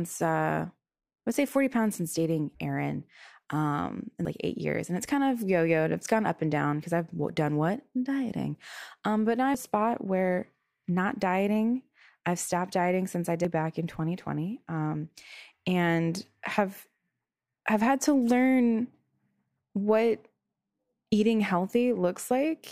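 At 4.25 s, between "um in" and "like eight years", compressed frames are skipped and roughly 0.4 s of speech vanishes. The same happens at 9.55 s after "but now" (about 0.2 s) and at 13.45 s after "stopped dieting since I" (about 0.7 s). The jumps fit whole frames of about 93 ms, and at each join the speech jumps ahead. A spectrogram shows abrupt discontinuities.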